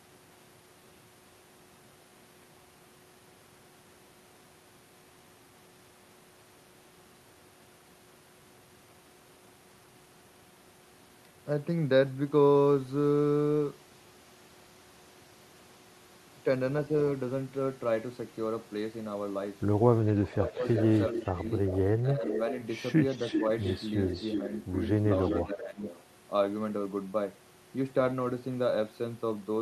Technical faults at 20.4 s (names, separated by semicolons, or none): speech suppressed in double talk; echo leak